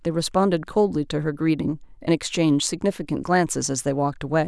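No technical faults are audible.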